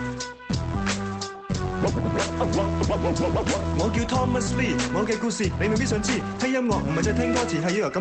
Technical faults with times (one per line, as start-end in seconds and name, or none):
0.74 skip ahead
5.23-6.88 jitter buffer speed-up